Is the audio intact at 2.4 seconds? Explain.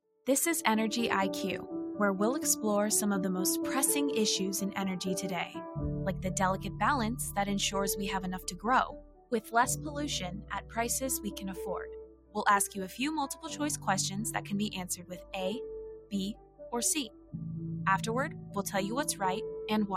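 No. At 2.4 seconds, as across the whole clip, a noise suppressor built for speech is treating steady tones, ambience and decay as noise. Attacks pass, but sustained parts and tails are pulled down by around 10 dB, so the sound pumps and thins.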